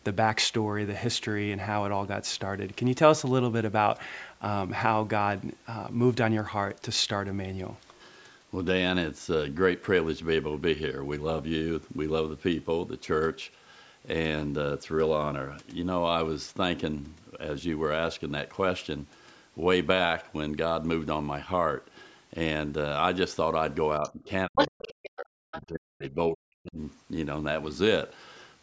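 From 24.0 to 24.29 s the speech dips by about 15 dB, likely speech suppressed in double talk: the echo canceller turned down the talker while both sides spoke. Within that, at 24.06 to 24.1 s, a faint second voice about 20 dB down breaks through, likely the other side's voice leaking through from the loudspeaker. From 24.46 to 26.79 s the talker dips for about two seconds, by as much as 40 dB, likely the same double-talk suppression. At 24.55 to 25.1 s the leaked far-end voice is about 5 dB louder than the speech, likely uncancelled loudspeaker echo. At 25.51 to 25.62 s a shorter scrap returns about 15 dB down, likely echo leakage again.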